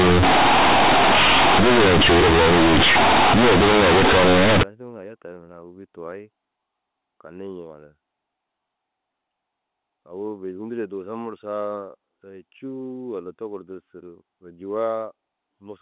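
From 0 to 4.63 s, the speech suffers companded audio read as linear: A-law bytes play as raw 8-bit samples without expansion, giving loud, buzzy distortion and heavy noise in pauses. Unlike clipping, quiet stretches are as harsh as loud ones. Afterwards normal A-law telephone sound returns, band-limited below 4 kHz.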